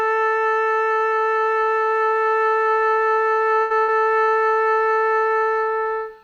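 At 3.61 to 3.73 s and again at 3.82 to 3.91 s, the sound freezes into a held, fading continuation and then jumps ahead. This is a burst of packet loss. Each time, about 60 ms of audio never arrived, and the receiver filled the gap by stretching and dimming what came before, covering 87 ms and 60 ms respectively.

At 4.24 to 4.32 s, a sound hangs on slightly too long, with a slight buzz or dip, before carrying on from the same point. This is a short stall from a late packet. The jitter buffer ran dry, so the receiver stretched the last sound for about 34 ms until the packet arrived, and nothing was lost.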